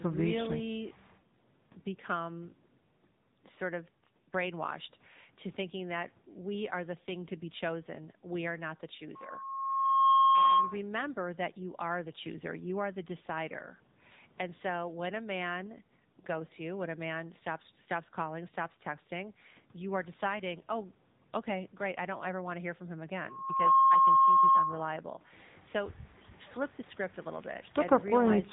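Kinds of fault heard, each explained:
AMR narrowband mobile codec: speech passed through a low-rate mobile coder, consistent with about 8 kbps, leaving nothing above 3.8 kHz and a plainly buzzy, synthetic voice.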